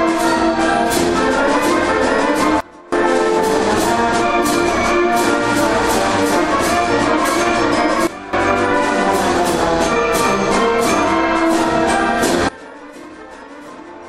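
At 2.60 s the level drops abruptly by about 24 dB and stays down until 2.92 s, a sudden gain jump in both directions with no fade. The same happens from 8.07 to 8.33 s, about 15 dB down, and again from 12.49 s to the end, about 20 dB down. Sound and background noise fall together. The likely cause is a digital gain change applied between adjacent samples without a ramp.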